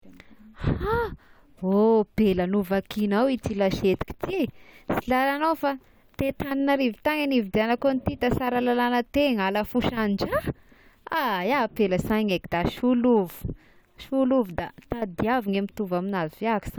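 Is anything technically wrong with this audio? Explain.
No, nothing technically wrong turns up anywhere in this speech recording.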